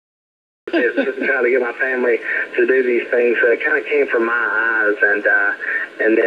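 From 0 to 0.68 s there is silence, then sound bursts in mid-event with no attack or fade: a cut-off start, where recording began late.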